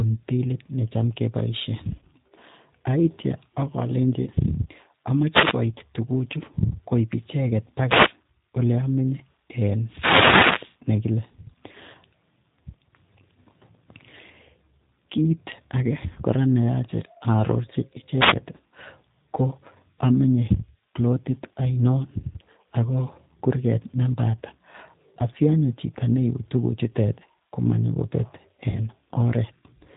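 Speech here, and the whole thing is squeezed through the G.729 codec. The top end stops dead around 4 kHz. Voices come out intelligible but rough and a bit synthetic, with the damage plainly audible. That's what you get when speech is rebuilt from a vocal tract filter, a pitch predictor and a handful of pulses per 10 ms frame, and the sound fits an 8 kbit/s G.729A-style stream. On top of that there are four short dropouts from VoIP packet loss concealed by the speech codec: 1.99 to 2.04 s (30 ms lost), 5.78 to 5.81 s (20 ms), 16.13 to 16.19 s (30 ms, just before "kora neyache") and 28.70 to 28.79 s (50 ms). In each gap the decoder keeps extending the last pitch and filter shape at falling gain, so you hear a short buzzy or smeared tone fading out. Because each frame builds on the one before, the voice stays weak or distorted for a moment after audio resumes.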